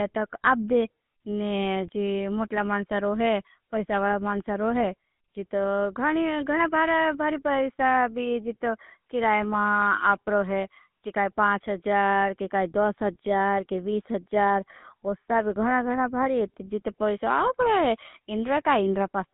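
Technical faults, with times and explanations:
Throughout: GSM full-rate codec. The speech carries the plainly audible buzzy, gravelly roughness of the original GSM coder, which fits a 13 kbps full-rate stream. The coder models the vocal tract as a filter and drives it with a coarse, regularly spaced pulse train that keeps only one excitation sample in three, so fine detail in the voice source is replaced by a rasping texture. The band runs only from about 150 Hz to 3.6 kHz, removing the low body and all the upper air.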